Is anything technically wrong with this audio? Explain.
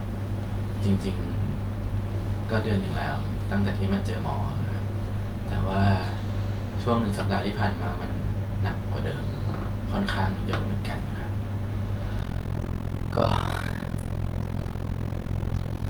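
Yes. From 12.19 s to the end, overlap-add ripple appears. Frames rejoin with uneven overlap, so level dips about 60 dB around 40 times a second: a harsh, rough flutter.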